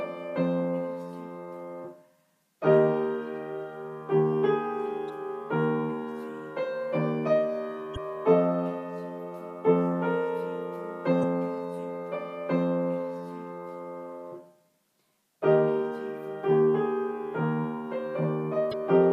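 Four short bursts of damaged data in a compressed stream occur at 5.06–5.10 s, 7.93–7.98 s, 11.20–11.24 s and 18.69–18.74 s. Each lasts about 40 ms. At those points, bytes in the encoded stream were lost or corrupted. The decoder misreads the affected frames and loses sync. It then hunts for the next valid frame header. Each event is heard as a brief chirp or blip breaking through the sound.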